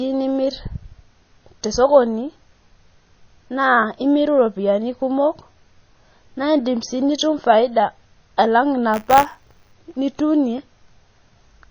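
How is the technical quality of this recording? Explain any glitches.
The quality is held back by codec damage throughout, and there's one short burst of buffer tearing near the end.

The whole clip has a dull, band-limited sound, plus a watery, swirly texture and smeared consonants. That's most likely MP3 compression at a very low bitrate, around 24 kbps. Starved of bits, the encoder chops off the treble at a fixed point and drops quieter frequency components. Those components flicker in and out from frame to frame, which is what produces the swirl.

From 8.93 s to 9.73 s, right after "faida alang", there's a robotic buzz at 100 Hz riding on the speech. That's buffer tearing. The software filling the audio buffer and the hardware reading it have drifted so that they cross inside every period. A small slice of each buffer, a few percent, plays audio from one lap earlier, about 20 ms old, with hard joins on both sides. 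Repeating every buffer, that fits 10 ms periods and produces the buzz.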